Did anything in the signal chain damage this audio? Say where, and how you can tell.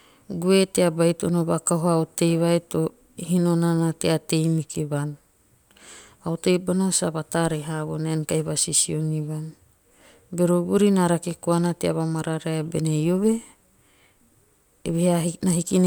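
No, nothing in the chain seems to have touched this one; the speech comes through with no audible damage anywhere along the way.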